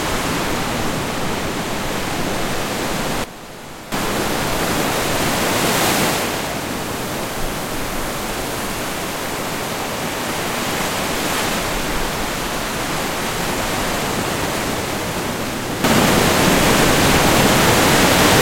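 At 3.24 s the whole sound, background noise included, abruptly falls by about 13 dB and stays low until 3.92 s, when it snaps back. At 15.84 s everything jumps up by about 9 dB and remains there to the end. Both are sudden gain jumps, likely from a digital gain setting being applied instantly from one sample to the next rather than being ramped, so signal and noise floor shift together.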